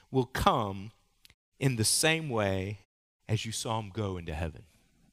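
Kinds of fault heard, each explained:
No faults detected in this speech recording.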